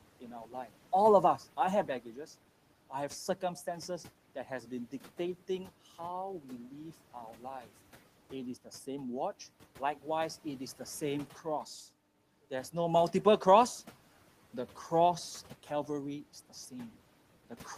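Speech, with one fault from the noise suppressor. Between 1.87 and 2.28 s, some of the speech is cut by the noise suppressor. The suppressor mistakes quiet parts of the speech for background and turns them down with it, by about 9 dB at the deepest point. Only about a tenth of a second is affected in total, so soft sounds there come across as swallowed or faint. The room noise sits about 23 dB below the speech.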